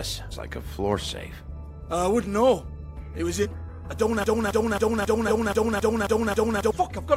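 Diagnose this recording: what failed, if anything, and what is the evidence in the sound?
Glitches at 0.30, 3.42, 5.27 and 6.90 s, each jumping ahead about 0.7 s (the last about 0.3 s): compressed frames skipped in the codec stage, consistent with 46.4 ms frames.

From 4.24 to 6.71 s a 0.27 s fragment repeats 11 times back to back, a broken-record loop, most likely from the playback stream stalling and resending its last buffer.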